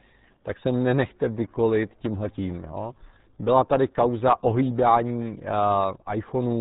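From start to finish the speech has passed through the RealAudio 14.4 codec, a dial-up era coder squeezing speech into a very small data stream. The heavy damage heard here fits an 8 kbit/s stream. To save bits the coder discards everything above 3.8 kHz and rebuilds the rest coarsely, so consonants lose their edge and the voice sounds muffled and boxed-in, with a gargling, watery roughness running through every syllable.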